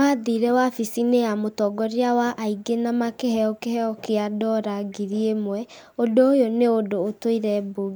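No technical faults are audible.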